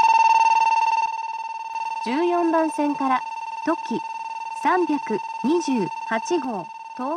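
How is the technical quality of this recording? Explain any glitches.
Two abrupt level drops mar the recording. From 1.06 to 1.74 s, and again from 6.45 s to the end, the sound falls by about 6 dB; the first drop then recovers. The cause is likely one channel dropping out before the mono sum, which halves the shared content. Unlike a fade or gain dip, the step is instantaneous and sits at about 6 dB both times.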